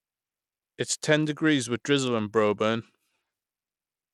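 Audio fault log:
Throughout, Bluetooth SBC compression: the speech has clearly audible codec damage. The top end thins out and flickers, sibilants come and go, and a gritty haze sits on the voice. That's likely SBC running at a low bit pool, around a 96 kbps stream. There aren't enough bits for the weaker high sub-bands, so they drop out or get quantised coarsely. That leaves the rough noise and aliasing you can hear.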